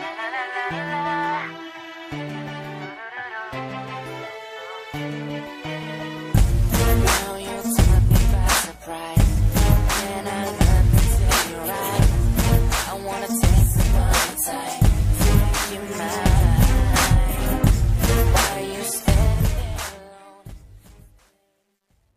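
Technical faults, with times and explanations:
19.20–22.16 s: truncation distortion on the fade-out. As the level drops, the waveform collapses into coarse steps, which fits an 11-bit stage without dither. From 20.59 s the tail turns gritty.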